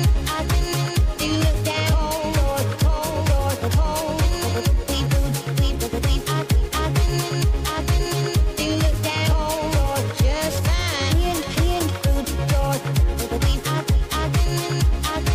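From start to finish the audio carries periodic clock jitter. Interference is shaking the converter's sampling clock at around 2 kHz, so every component of the sound gains copies about 2 kHz above and below it, stronger for higher frequencies. It is heard as a rough, metallic edge clinging to the sound and disappearing in silence. On a spectrogram, paired sideband traces shadow each component at that spacing; the waveform looks nearly unchanged.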